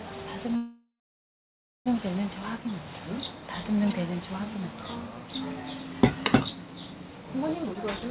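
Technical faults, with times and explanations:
0.56–1.88 s, call audio freeze: the sound stalls, the last bit lingers as a fading buzz, then about 1 s of silence before it resumes where it left off. Likely delayed packets emptied the jitter buffer, so roughly 1.3 s of gap went in and nothing was lost.
7.64–8.10 s, jitter buffer speed-up: the sound runs about 15% fast at the same pitch and sounds hurried. The buffer held more than its target, so the receiver cut short pitch-period slices, around 70 ms in total, to bring the delay back down.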